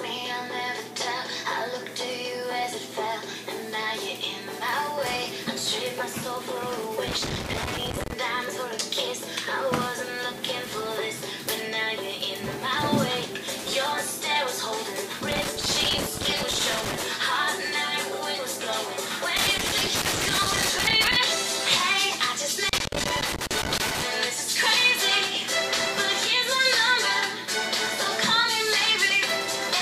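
A worn or dirty contact in the signal path keeps making and breaking, causing loose connector crackle: irregular bursts of scratchy, chopped sound at 7.08–8.13 s, 15.31–17.06 s, 19.37–21.17 s and 22.69–24.02 s.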